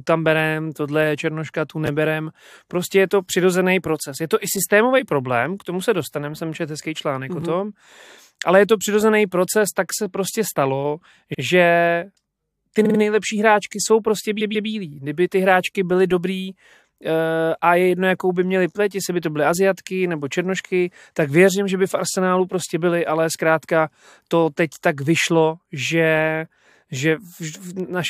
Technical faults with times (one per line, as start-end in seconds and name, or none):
1.86-1.88 chunks out of order
2.46-2.49 repeated frames
7.41-7.43 chunks out of order
11.33-11.40 repeated frames
12.84-12.98 repeated frames
14.40-14.68 repeated frames
22.11-22.13 repeated frames